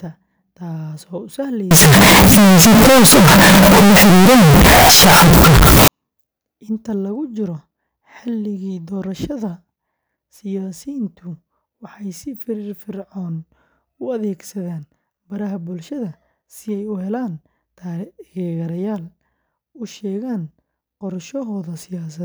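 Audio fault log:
1.71 to 5.88 s, float read as integer: the speech turns abruptly very loud and harsh, squared off at an almost fixed, high level, with background noise as loud as the voice, though pitch still comes through. This likely comes from 32-bit float samples being read as 32-bit integers.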